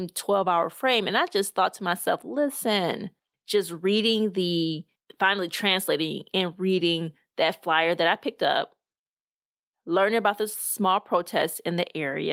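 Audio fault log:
Nothing stood out on listening to this speech recording.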